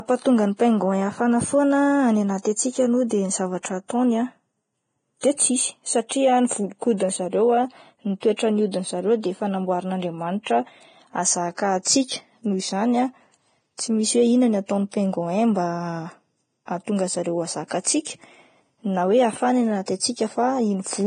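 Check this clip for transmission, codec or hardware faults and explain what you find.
The speech carries codec damage for its full length, consistent with heavy Vorbis compression, likely at a low setting that fits a bitrate of around 23 kbps. Nothing is present above 9.7 kHz. Below that limit, the encoder has quantised the upper residue so coarsely that fine spectral detail is swapped for noise of similar energy. The result is a hissy, grainy top end, roughened vowel tones and softened consonant attacks.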